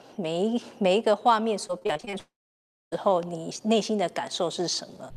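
From 1.67 to 2.15 s the sound turns choppy: this is repeated packet loss (robotic sound). A run of short holes, none longer than about 23 ms, is each patched by stretching the preceding sound, so roughly a third of this stretch is filler, which gives the rapid stutter.

From 2.19 to 2.94 s comes a different gap, most likely a long network dropout. A brief fading buzz or hiss gives way to about 0.6 s of silence before the sound resumes further on with the missing part skipped. It is one sustained hole rather than a chain of tiny ones.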